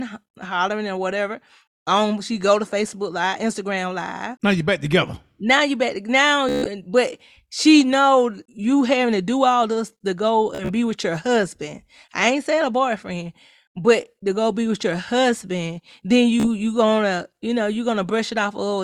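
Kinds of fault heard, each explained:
Bluetooth stutter: A buzzy, machine-gun repeat of a tiny slice of speech, longest after "you back now" at 6.49 s and shorter after "all this to go" and "with your husband then". Lost or late wireless packets made the receiver replay its last buffer, then skip ahead.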